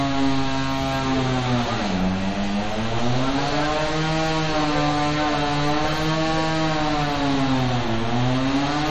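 MP3 compression artefacts run throughout: nothing sounds above 13.6 kHz, and plainly audible watery swirling suggests bits ran short, likely from encoding at a low bitrate around 48 kbps.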